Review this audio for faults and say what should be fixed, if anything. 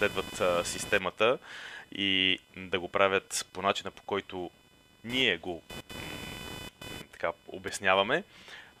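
There's computer activity noise running under the speech the whole way through. It's a buzzy, chirpy whine pulsing at somewhere around 500 Hz, sitting roughly 20 dB below the speech. It rises and falls with what the machine is doing rather than with the talking. That points to processor or graphics load currents shifting the ground the audio circuit shares, so the interface picks up the computer's own electrical chatter. To fix it, record through a USB audio interface that's properly isolated (or add a ground-loop isolator) and keep the input path off the computer's internal ground.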